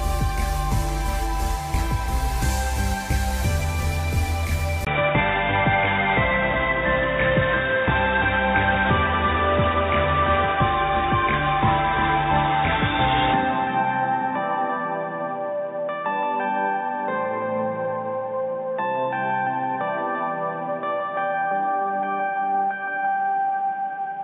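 At 4.85 s a 20 ms gap precedes a dull, boxy sound with nothing above 3.8 kHz, a level shift, and new noise, likely an input switched to a poorer device.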